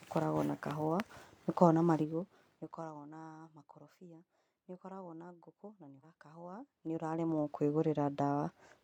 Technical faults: zipper noise; stream segment skipped

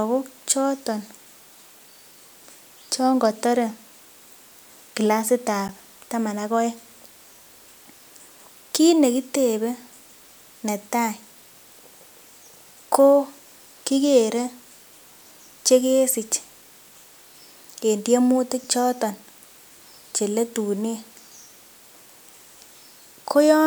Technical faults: block of digital silence

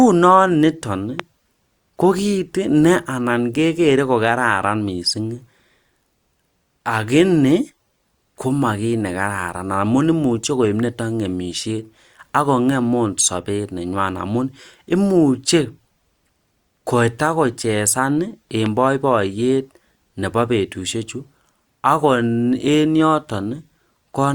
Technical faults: loud pop

